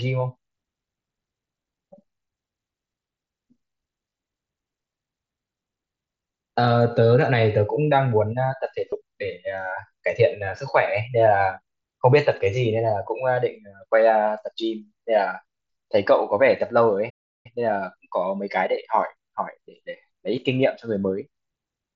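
Concealed Bluetooth headset packet loss occurs twice, from 4.10 to 4.12 s and from 8.90 to 8.92 s. Voice packets between the headset and the phone went missing, and the receiver filled each gap of about 22 ms, which fits three lost frames, by repeating the closest-matching stretch of the preceding waveform. Each patch comes across as a brief buzzy, held-tone quality followed by a slight warble as the real speech resumes through the mSBC link.

A playback stall follows from 17.09 to 17.46 s. The player most likely ran out of buffered data, or its thread was held up, so nothing reached the output for about 350 ms. The speech cuts off abruptly in mid-flow into silence and then continues once playback recovers, leaving a clearly noticeable hole rather than a smoothed-over gap.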